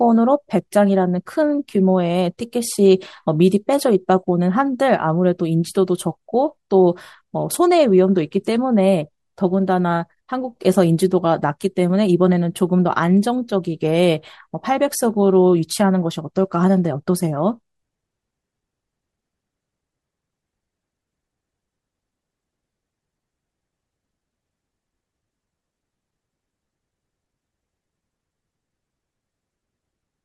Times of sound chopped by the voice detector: none

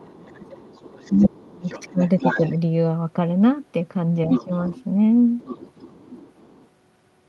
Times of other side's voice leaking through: 0.25-1.29, 1.64-2.52, 4.30-4.84, 5.39-6.66

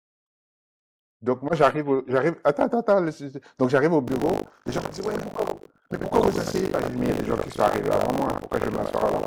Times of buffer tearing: 4.06-9.27

